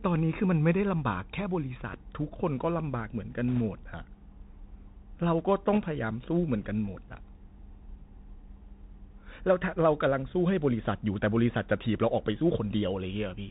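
Throughout the speech, the sound carries the character of the Bluetooth CVSD headset codec. The band stops at about 4 kHz, which fits a 64 kbps stream sending one up-or-down bit per sample with an adapting step size. The codec damage is plainly audible: the step size cannot keep pace with loud, bright passages, which distort. Sibilants come out scratchy, and a grainy hiss sits beneath the speech for the whole clip.

From 3.48 to 3.61 s, and again from 5.73 to 5.79 s, there are bit errors on the Bluetooth voice link. Flipped bits in the CVSD stream nudge the reconstructed waveform up or down by a single step each, and the adaptive decoder recovers quickly. The result is no hard clicks but a brief rushing crackle layered over the speech. The error rate is around a percent or two, slightly heavier in the second burst.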